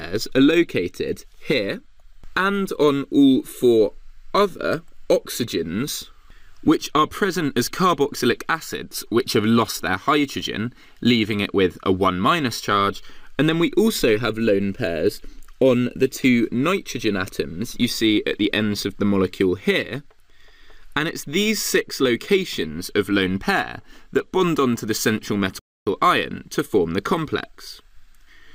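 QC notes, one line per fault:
25.59–25.87 s, playback stall: the sound halts in mid-flow and falls silent for 0.27 s before carrying on. The likely cause is the player running short of data or its thread being held up. Unlike a short dropout click or a level dip, this is a clean, full silence long enough to register as a pause.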